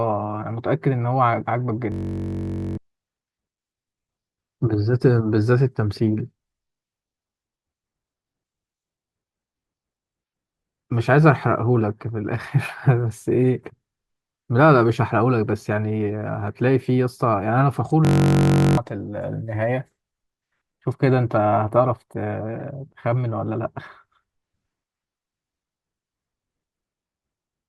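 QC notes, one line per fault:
1.92–2.77 s and 18.05–18.77 s: system hang loop. A 21 ms piece repeats, buzzing at about 47 Hz, which fits a 1024-sample buffer. The hangs skip roughly 1.0 s and 0.7 s of speech.
22.59–22.62 s: corrupt frame decoded. A damaged frame puts energy at the wrong frequencies, heard as a brief chirp, squeak, blip or burst of noise peaking near -25 dBFS.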